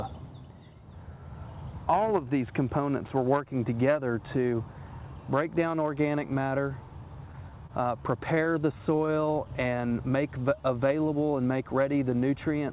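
A short stall from a late packet comes at 7.67 to 7.72 s. A packet arrived late, the jitter buffer ran dry, and the receiver stretched the last sound by about 26 ms before resuming where it left off. Nothing is lost, but that moment hangs with a faint buzz or dip.

Scattered short gaps follow from 8.35 to 9.49 s: around seven separate lost or late packets, none longer than roughly 20 ms. Each hole was patched by extending the preceding sound, so the stretch stays clear but picks up brief ticks and small smeared hiccups.

A jitter buffer slow-down overlaps this, running from 9.06 to 11.58 s. To rebuild its reserve, the buffer repeated single pitch periods and slivers of pauses, adding 215 ms. The sound plays at about 92% speed with unchanged pitch, drawn out. Throughout, the band stops at 4 kHz, consistent with a 64 kbps G.711 mu-law call path.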